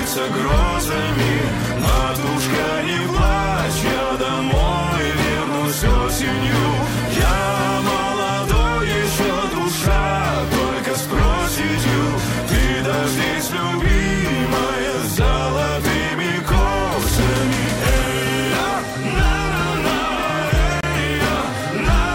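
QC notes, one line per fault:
20.81–20.83 s, gap at a join of encoded pieces: a 27 ms gap where separately encoded segments meet, shown as a vertical blank band with smeared edges across the spectrogram.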